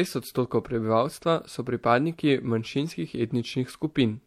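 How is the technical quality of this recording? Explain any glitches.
No glitches turn up anywhere in this one, so there's nothing here that calls for an explanation.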